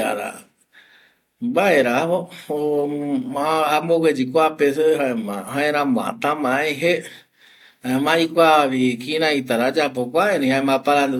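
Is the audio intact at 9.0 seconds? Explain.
Yes, the speech at 9.0 seconds plays through cleanly, with no dropout, click, distortion or other fault at that moment.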